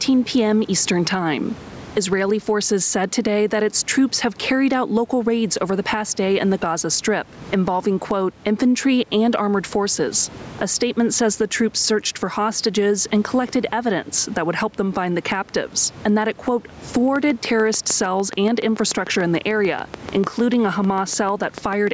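Gain pumping runs through the whole speech clip. The level swings by around 15 dB. Loud and soft parts end up closer in level, and the sound is squashed. The likely cause is input gain set far too high, with a fast limiter clamping down.

A train of clicks starts at 17.16 s, just after "and that it quote", and lasts until 21.88 s. Around thirty similar clicks arrive at a regular 6.8 per second, peaking a few dB above the speech. They tick through pauses too, likely from electrical interference or a faulty connection.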